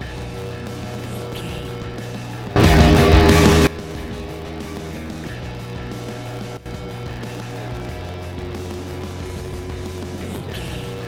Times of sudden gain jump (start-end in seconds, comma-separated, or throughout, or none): 2.56-3.67, 6.57-6.66